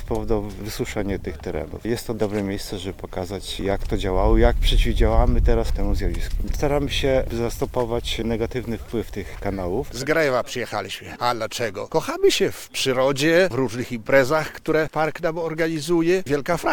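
No technical faults detected anywhere in the recording.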